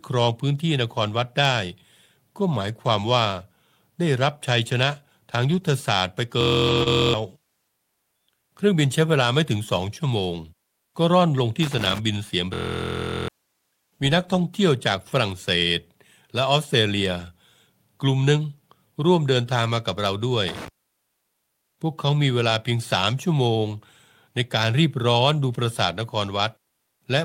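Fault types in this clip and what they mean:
Lost packet rebuilt from error correction: packets went missing but backup copies filled in, so 5.49–5.63 s and 6.67–6.81 s sound rougher and noisier rather than gapped.
System hang loop: the system froze while a 23.22 ms chunk replayed at 43.1 Hz, a buzz at 6.41–7.14 s and 12.54–13.28 s, which fits a 1024-sample buffer.
Short concealed packet loss: about 20 ms went missing at 6.83–6.88 s, and the decoder smeared the previous sound across the hole before blending back in.
Loose connector crackle: a flaky contact chopping the signal gives irregular scratchy crackle bursts at 11.63–11.99 s and again at 20.48–20.68 s.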